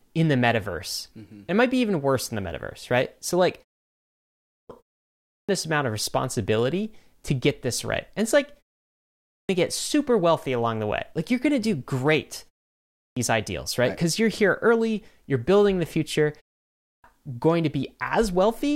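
In this speech clip, the output device sleeps during short pauses and wakes too slowly, causing a clipped start after a pause: roughly 0.37 to 0.43 s is swallowed at 4.27, 5.12, 9.09, 12.79 and 16.65 s, so speech bursts in abruptly.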